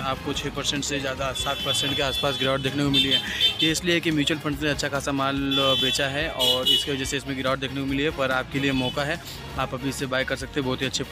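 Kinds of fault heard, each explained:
Nothing stood out on listening; no fault could be heard anywhere in the audio.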